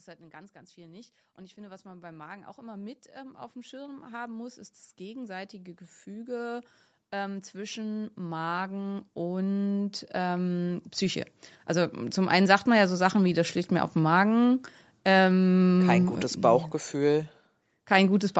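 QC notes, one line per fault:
0.17–12.95 s, automatic gain rising: the level climbs steadily by about 26 dB over nearly 13 seconds, with speech and background noise swelling together because the automatic gain control judged the input too quiet and kept raising its gain in slow steps rather than all at once. The lifted noise floor is the giveaway that this is gain, not louder talking. Above 8 kHz the band is empty, which fits the call codec's bandwidth limit.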